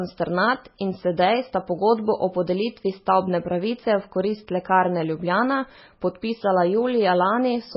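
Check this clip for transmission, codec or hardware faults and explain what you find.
One codec fault runs through the whole recording. The speech sounds watery and swirly, with metallic chirps on s sounds, and nothing is heard above 5.6 kHz. This is likely heavy MP3 compression at a very low bitrate, around 16 kbps. Starved of bits, the encoder cuts the treble and switches weak frequency lines on and off between frames.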